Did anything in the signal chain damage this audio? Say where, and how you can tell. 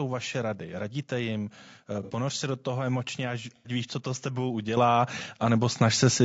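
Yes. Codec stage: the voice sounds rough and grainy throughout, with noise between harmonics and a dull top band. That points to low-delay AAC compression, likely AAC-ELD near 32 kbps.

Network stage: AAC frame loss with concealment causes smeared, noisy patches at 2.03–2.11 s and 3.56–3.70 s. The decoder patched missing frames from the previous spectrum.

Call processing: the microphone volume stepped up at 4.77 s by about 7 dB and at 5.79 s by about 3 dB. Voice and background jump together, showing a device gain change.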